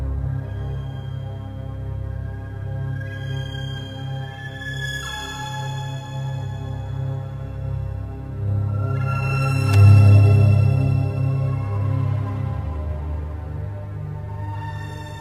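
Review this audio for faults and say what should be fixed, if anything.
There's a short burst of loose connector crackle from 9.73 to 9.75 s, a quick scratchy crackle where a worn or dirty contact briefly lost and regained connection, chopping the signal for a moment. To prevent it, clean or replace that cable and make sure plugs are seated firmly before recording.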